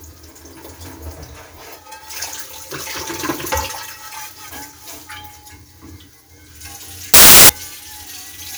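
At 7.14 s the sound suddenly turns into loud, harsh hiss. It lasts about 0.36 s and stops at 7.49 s. This is samples built from the wrong bytes. The reader has joined each sample's bytes incorrectly. It may be one byte off, have them swapped, or be misaligned. The small, rapidly changing low bits end up as the dominant part of every value. So the waveform becomes near-random and sounds like a burst of harsh broadband noise covering the original sound.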